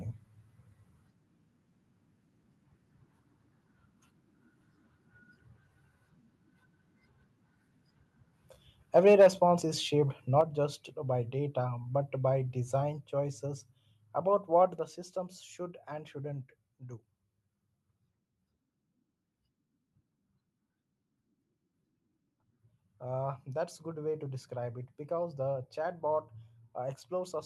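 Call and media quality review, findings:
Microphone overload, 8.96 to 9.27 s: harsh, crackling edge on the loudest syllables, with peaks about 4 dB beyond the converter's limit and roughly 7% of samples flattened. Likely cause is excessive mic input gain driving the converter into hard clipping. It differs from codec distortion because it appears only on peaks, not as constant coding grain across the 12 kHz Opus band.

Microphone volume stepped down at 9.22 s (about 3 dB), 10.41 s (about 5 dB) and 14.79 s (about 5 dB): abrupt level drops in which voice and background fall together. The likely cause is call-software input-volume control reacting to the mic being too loud or clipping. Unlike compressor pumping, each step is instantaneous.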